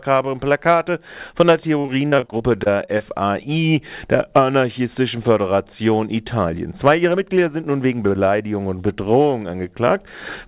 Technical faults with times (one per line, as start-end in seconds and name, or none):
1.80-3.02 repeated packet loss (robotic sound)